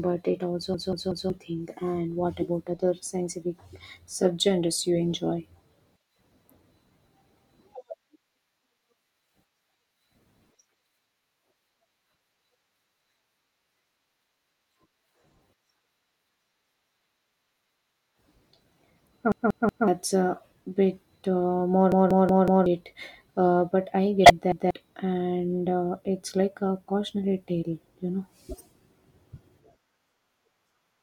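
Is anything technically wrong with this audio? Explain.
Yes, two kinds of fault occur in this speech.

Repeated buffer, four times: 0.74 to 1.30 s just after "but it", 19.32 to 19.88 s, 21.92 to 22.66 s, and 24.52 to 24.71 s just before "and uh it's like". Fresh audio failed to reach the output in time, so the device replayed its last block of about 186 ms, which fits an 8192-sample buffer. That block sounds three extra times in the first two events, four in the third and once in the last. Each event is a hard-edged stutter, and the speech that should have filled that time is lost: roughly half a second in the first two, about 0.7 s in the third and about 0.2 s in the last.

Corrupt frame decoded, three times: 4.25 to 4.27 s, 24.24 to 24.30 s, and 28.50 to 28.63 s right after "cautionary tale you know". Damaged bits in the compressed stream were decoded anyway. The resulting wrong gains and misread codes put energy at frequencies where the speech has none for the length of the affected frames, a few of them each time. 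Each one is a brief synthetic chirp or burst laid over the speech, and the longest is the one at 28.5 s.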